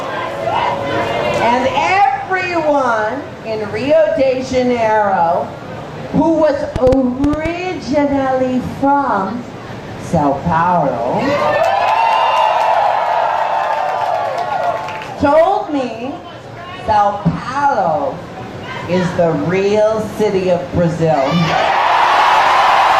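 A short, uneven burst of about seven sharp ticks, roughly 7 per second and about 10 dB above the sound, runs from 6.76 to 7.47 s: a train of clicks, likely interference or a faulty connection.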